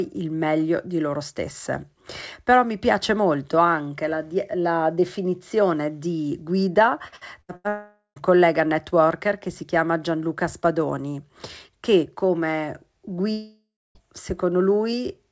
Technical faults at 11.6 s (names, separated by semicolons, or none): none